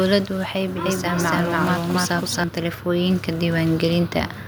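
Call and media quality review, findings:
Doubled audio track, 0.86 to 2.44 s: full-band second copy of the speech trailing by roughly 300 ms at about equal level, dry, no decay or room colour, cutting in and out abruptly. Likely cause: same signal mixed twice via a slower capture path.

Automatic gain rising, 2.54 to 3.57 s: speech and background swell together by about 4 dB over roughly a second. AGC judged input too quiet and ramped its gain up gradually, lifting noise floor along with the voice.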